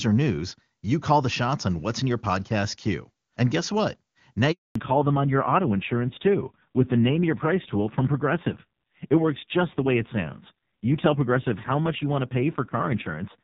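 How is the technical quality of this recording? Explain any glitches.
The recording has two linked glitches near the 4.5 second mark, after which the call sounds noticeably degraded to the end.

Handover gap, 4.51 to 4.75 s: the speech drops out completely for 240 ms. This is what happens when a phone hands the call between networks and no voice frames get through during the switch, so the speech fades within a few tens of milliseconds and anything said in that window is lost.

Fallback to narrowband, from 4.75 s onward: once the new link starts, nothing is left above 4 kHz, so the speech loses its crispness and sounds duller and rougher. The call has dropped from HD Voice to an older narrowband codec. The raspy texture fits one of its lower bitrates, around 5.9 kbit/s, whereas the wideband stretch before the gap sounds clean and full.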